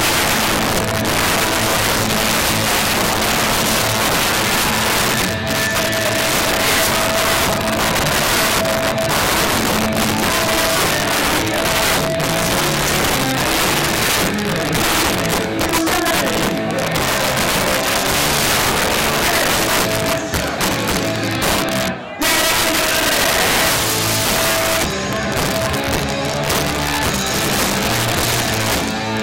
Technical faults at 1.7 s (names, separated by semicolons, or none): integer overflow